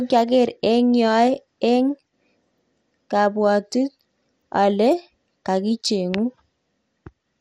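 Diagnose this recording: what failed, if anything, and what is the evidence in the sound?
Codec stage: the speech sounds dull and gurgling for the whole clip, with nothing above 15.1 kHz, likely MP2 compression at a low bitrate, consistent with about 64 kbps.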